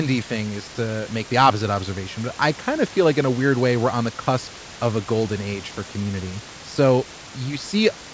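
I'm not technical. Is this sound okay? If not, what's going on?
Yes, this sounds fine: there's just a little background noise from the room, sitting well below the speech, and the slightly muffled, phone-call quality is what you'd expect from audio sent over a call.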